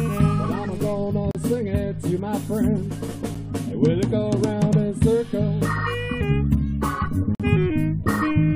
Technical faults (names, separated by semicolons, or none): gap between stream segments